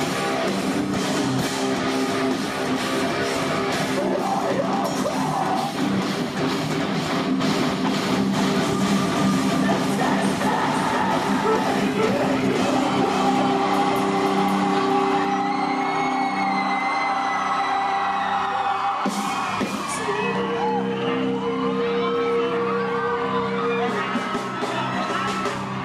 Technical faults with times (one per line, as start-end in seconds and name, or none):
7.41-15.25 doubled audio track